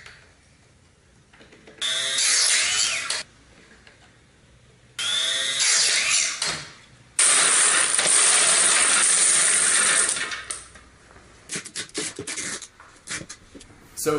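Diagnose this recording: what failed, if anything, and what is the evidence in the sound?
Nothing failed in this recording.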